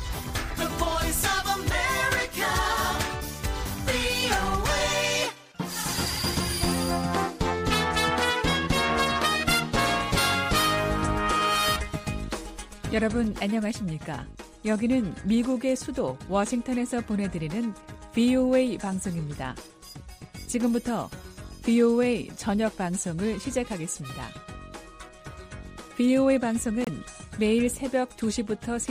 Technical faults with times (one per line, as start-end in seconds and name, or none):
26.84-26.89 damaged data in a compressed stream